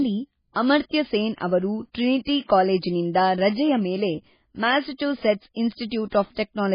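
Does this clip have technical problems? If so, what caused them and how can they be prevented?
Yes. MP3 compression damage runs through the whole clip, and the likely cause is heavy MP3 encoding at a very low bitrate, which fits something around 16 kbps. Nothing is present above 5 kHz, so the speech sounds dull and muffled. With too few bits, the encoder discards weak frequency components that flicker in and out from frame to frame, giving a watery, swirling texture and smeared consonants. To prevent it, encode at a much higher bitrate or use a lossless format.

Pre-echo appears at 5.89 to 5.91 s, right after "ಕಾಲೇಜಿನಿಂದ ರಜೆಯ ಮೇಲೆ ಮ್ಯಾಸಚೂಸೆಟ್ಸ್". A sharp onset there lands late in a coding block. The codec spreads its quantisation noise across the whole block, so noise sized for the loud attack leaks into the quiet moment before it. The result is a short hiss lasting about 22 ms ahead of the attack, which also softens it. 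To prevent it, use a higher bitrate and an encoder with good block switching for transients.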